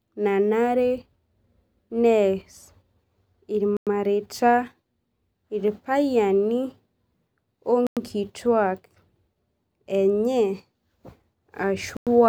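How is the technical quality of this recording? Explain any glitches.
The speech is interrupted by a gap between chunks three times. Silent holes of 100 ms open at 3.77, 7.87 and 11.97 s. They recur every 4.1 s, which fits 4-second chunks each followed by inserted silence. Nothing is lost. Each join just stops dead.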